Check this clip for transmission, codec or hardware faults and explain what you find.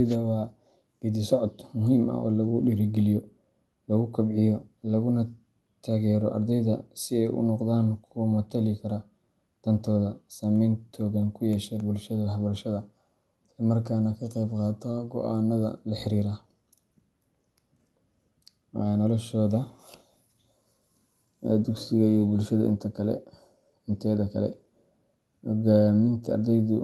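No faults detected.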